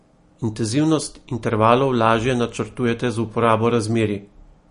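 Speech, and the whole clip carries plainly audible MP3 compression damage: nothing survives above about 10.6 kHz, and the sound has that watery, swirly quality with chirpy s sounds and smeared attacks, likely from an encoder starved of bits, which fits a low bitrate around 40 kbps.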